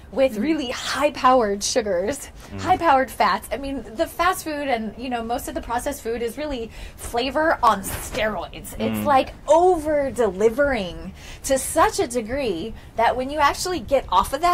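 At 7.67 s, overlap between stream segments removes 13 ms where timestamps collide; the waveform jumps, giving a tiny skip rather than a silent dropout.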